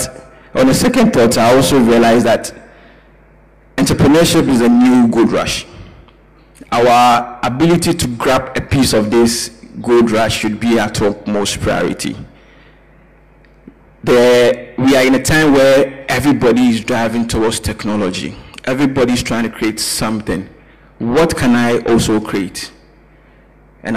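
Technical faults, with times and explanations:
Nothing stood out as a technical problem on listening.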